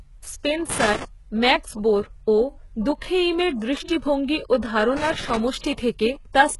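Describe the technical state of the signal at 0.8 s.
At 0.8 s there is loose connector crackle from 0.70 to 1.05 s, ending just before "ম্যাক্স বোর ও". A failing contact chops the signal into irregular scratchy bursts, seen as ragged gaps and spiky vertical streaks on waveform and spectrogram. Throughout, heavy damage points likely to HE-AAC compression at a very low bitrate, around 12 kbps. The treble is rebuilt from copied lower bands, giving gritty sibilance and a hard spectrogram ceiling at 11.4 kHz.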